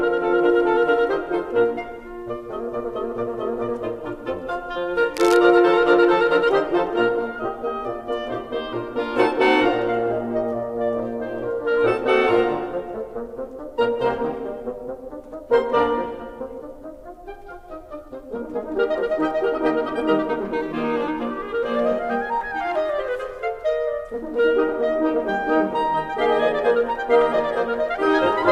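At 5.14 s the music picks up a burst of cable scratch noise lasting about a quarter of a second, to 5.39 s. It sounds like rough, uneven scratching laid over the track, sitting roughly 10 dB below it. The likely cause is a worn cable or connector being moved, its contact resistance jumping rapidly.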